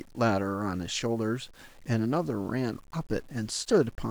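From start to finish the speech carries a grainy, rasping edge: low bit depth without dither. The fuzz sits roughly 30 dB below the signal and tracks it, growing coarse on quiet syllables and collapsing to silence or sputter in pauses. The likely cause is rounding to about 8 bits with no dither. On a waveform, low-level passages show visible stair-steps. A spectrogram shows broadband hash that appears and vanishes with the speech rather than a steady noise floor.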